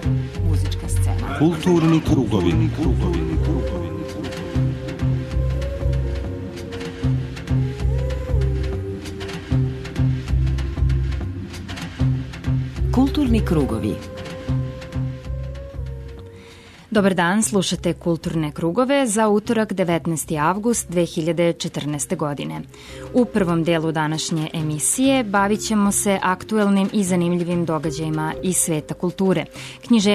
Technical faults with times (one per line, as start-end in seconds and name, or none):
23.69 repeated buffer
28.39 repeated buffer